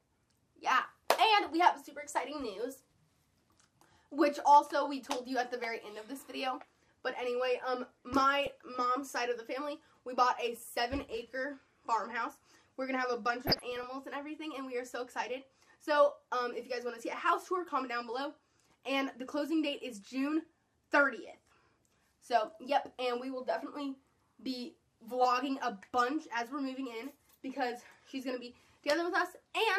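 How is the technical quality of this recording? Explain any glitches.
Two bursts of DAB burbling mar it. Weak reception let bit errors slip past error correction into the MP2 data, throwing individual sub-bands out of level. The result is a short burst at 8.44–8.48 s, then a longer one from 13.41 to 13.84 s.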